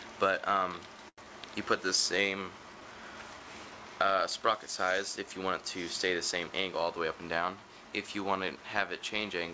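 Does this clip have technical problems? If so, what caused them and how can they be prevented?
Yes. There's a short stall from a late packet at 1.09–1.26 s: the jitter buffer ran dry, so the last sound got stretched about 90 ms until the packet showed up. A deeper jitter buffer would absorb that.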